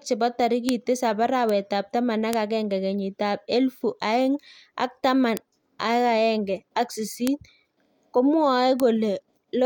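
Bit error spikes at 0.69, 1.49 (just before "ap taman"), 2.33, 5.37, 7.27 and 8.80 s: single flipped bits throw one to three samples to about -4 dBFS (about -10 dBFS at 1.49 s), each heard as a sharp, broadband tick.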